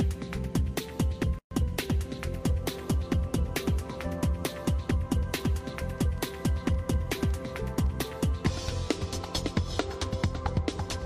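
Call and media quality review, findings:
Dropout, 1.39–1.51 s: a 124 ms hole of silence cuts into continuous sound, with edges smeared by the codec. Sound resumes where it stopped. Gap at a join of encoded pieces: encoder start delay and final-frame padding left untrimmed at the join.

Ticking, 5.23–7.87 s: a regular train of clicks at 5.3 per second, about fifteen of similar shape, peaking roughly level with the signal. Likely pulse injection from nearby equipment interference or a faulty connection or power supply.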